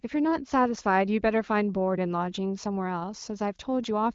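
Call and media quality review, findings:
Nothing to flag here: the speech sits on the AMR wideband (HD Voice) path with the band topping out around 7.5 kHz and only the light coding texture that fits a 15.85 kbit/s mode.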